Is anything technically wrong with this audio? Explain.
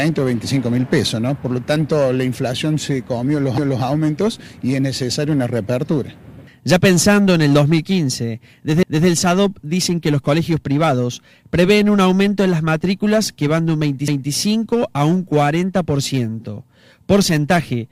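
Yes. The audio has overlapping chunks. A short stretch plays twice at 3.58 to 3.83 s, 8.83 to 9.08 s and 14.08 to 14.33 s. The audio was handled in 5-second chunks, and each new chunk began 250 ms before the previous one ended. So the last quarter-second of each chunk is heard again at the start of the next. The result is a brief stutter that recurs every 5.25 seconds.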